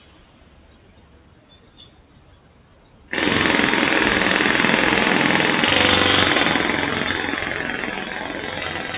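From the start to 3.12 s, the sound cut by the noise suppressor: it misread this stretch as noise and pulled it down by as much as about 9 dB. For roughly three seconds the steadier, sustained parts sink while sharper onsets still poke through.

Throughout, a noise suppressor applied to music or sounds, built for speech, stays active and keeps treating steady tones and decays as noise. Its gain swings by around 20 dB, so the sound pumps and flutters, tails are clipped short, and held material thins out.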